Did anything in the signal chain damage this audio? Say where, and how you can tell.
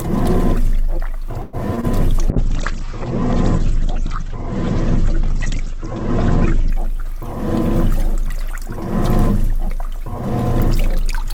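Yes. At 1.41 to 1.55 s the network stage likely stalled: packets were delayed and the jitter buffer ran dry. The receiver stretched the last sound into a fading buzz or hiss for about 0.12 s. This is a call audio freeze that inserts a gap while losing nothing.

Shortly after, at 1.75 to 1.79 s and again at 1.81 to 1.85 s, about 20 ms of audio failed to reach the decoder each time. This is short concealed packet loss. The decoder extrapolated from the preceding sound and blended back, leaving two quick smears or wobbles.

From 2.32 to 6.78 s there is a call bitrate drop at the codec stage. The bandwidth estimate collapsed and the encoder fell from 48 to 10 kbps, holding the lowest rate for about 4.4 s. Audio bandwidth shrank from 20 kHz to 8 kHz, so the sound turns coarse and dull.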